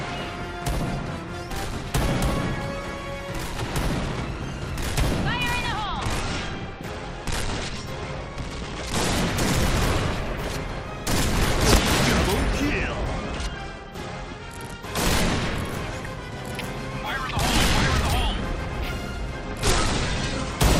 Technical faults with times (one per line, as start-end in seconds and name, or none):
5.85-9.13 Bluetooth SBC bit pool drop
12.71-14.91 Bluetooth SBC bit pool drop
19.44-20.60 Bluetooth SBC bit pool drop